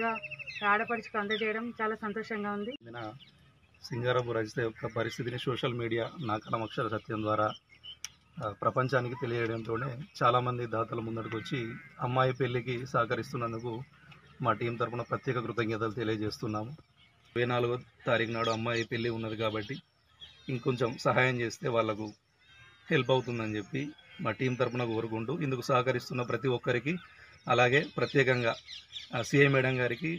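No technical faults can be heard anywhere in the audio.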